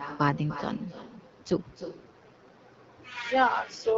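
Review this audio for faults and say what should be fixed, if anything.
Every phrase is shadowed by a quieter, thinner copy arriving roughly a third of a second later, about 11 dB down, throughout the clip. This is echo with no canceller: the far end's loudspeaker feeds its microphone and nothing subtracts it. Enabling acoustic echo cancellation on the far-end device, or using a headset there, would prevent it.

From 0.86 to 2.58 s the speech turns rougher and more synthetic, with no gap and no change in bandwidth, then recovers. This is an AMR rate drop, consistent with the AMR-WB stream falling from 12.65 to 8.85 kbit/s as the network traded bits for error protection on a weak radio link. Improving radio coverage at the handset would keep the codec at its normal rate.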